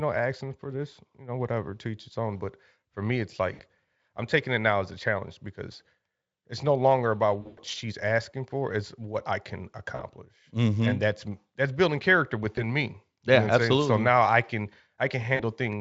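VoIP packet loss concealed by the speech codec hits at 3.53, 7.41 (the longest, about 140 ms scattered), 9.95, 12.55 and 15.35 s. The Speex decoder stretches the last sound into a fading buzz or coloured noise, staying weak briefly after.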